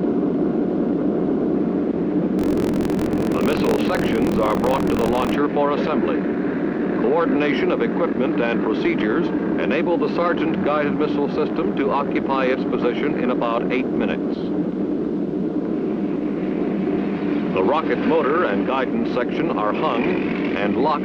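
From 2.37 to 5.36 s, buffer tearing sets in: writer and reader have slipped, so about a tenth of each period replays audio roughly 50 ms old, spliced in with hard joins. The result is a steady 43.1 Hz rattle, which fits a 1024-sample buffer. Unlike an underrun, it leaves no silent gaps.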